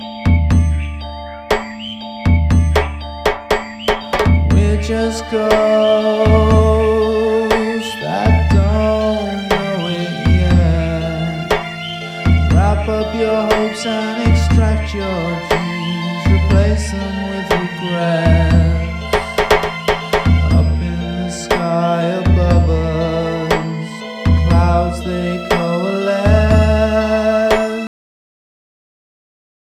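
The audio has a cut-off end: at 27.87 s it stops mid-sound and drops straight to digital silence, because the final buffers were never written out. A waveform shows the signal ending abruptly in a flat line, and a spectrogram shows a hard vertical edge with no decay tail.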